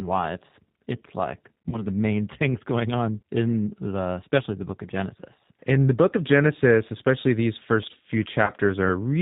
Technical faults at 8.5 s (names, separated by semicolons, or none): G.729 codec; VoIP packet loss concealed by the speech codec